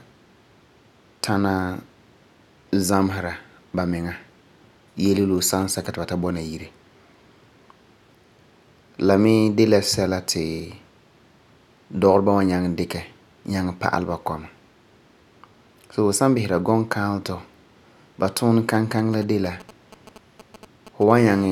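A galloping dit-dit-dit of short buzzes, sitting well below the speech, breaks in from 5.06 to 5.87 s, just before "ti ba ta bɔna", and again from 18.75 to 21.12 s, after "ba tuuni". These are GSM signalling bursts: a nearby 2G phone sends brief groups of radio pulses while signalling, and the audio circuit rectifies them into sound. Each group carries the characteristic 217 Hz buzz.

Right after that, from 21.19 to 21.47 s, the pattern turns into a continuous hard, raspy buzz at about 217 Hz, thick with harmonics and about 21 dB below the speech. This is GSM phone buzz. The phone has moved into a call and is now transmitting steadily 217 times a second, so the rectified pulses form an unbroken tone.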